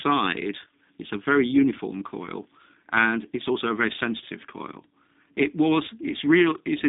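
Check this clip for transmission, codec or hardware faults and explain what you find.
One codec fault runs through the whole speech clip. G.729 codec, throughout: frames rebuilt from a vocal tract filter, pitch predictor and sparse pulses, fitting 8 kbit/s, leave audibly rough, synthetic speech confined to 250 Hz–3.7 kHz, nothing above 3.8 kHz.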